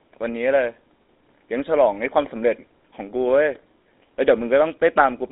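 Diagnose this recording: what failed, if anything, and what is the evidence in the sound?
The codec stage failed: the speech has passed through the GSM full-rate codec for the whole clip. The sound is band-limited to roughly 250 Hz to 3.7 kHz, with nothing above 3.8 kHz, and the voice carries a plainly audible buzzy, gravelly roughness. That roughness is what separates it from a clean narrowband telephone line. The codec rebuilds speech from a vocal-tract model driven by coarsely decimated pulse excitation, consistent with a 13 kbps full-rate stream.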